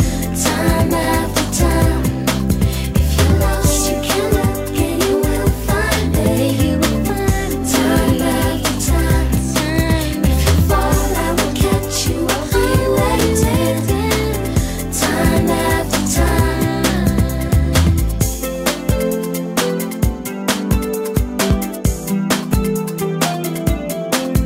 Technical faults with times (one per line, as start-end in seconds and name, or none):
1.03 chunks out of order
13.19-13.21 chunks out of order